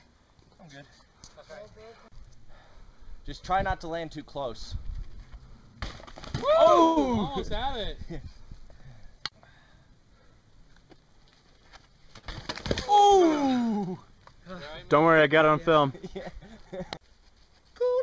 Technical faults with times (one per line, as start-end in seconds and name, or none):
6.84-6.98 call audio freeze
12.18-12.25 short stall from a late packet